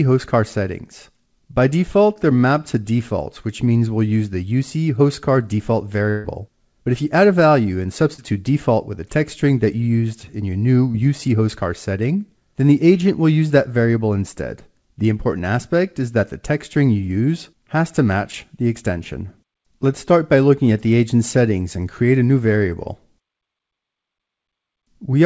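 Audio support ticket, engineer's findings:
Short concealed packet loss at 2.14–2.18 s, 8.14–8.20 s, 10.92–10.96 s and 13.48–13.52 s. Brief smear or wobble each time. Receiver-side concealment in the jitter buffer. About 20 ms of audio missing at 2.14, 10.92 and 13.48 s, about 40 ms at 8.14 s. The gap was filled by extending the preceding sound, then crossfaded back into the real signal.

Burst of packet loss at 6.10–6.26 s. Consecutive packets lost or late, about 140 ms gone. Concealment carried the last sound across the whole gap and attenuated it as it went. The result is a held buzz or a fading hiss, with no silence. The sound then resumes further on, and the stretch in between is absent. Mechanism is the same as above, over a longer span.

Heard through the call codec, with nothing above 8 kHz, consistent with G.722 at around 64 kbps.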